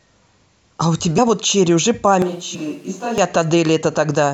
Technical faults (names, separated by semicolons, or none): compressed frames skipped; switch to a distant microphone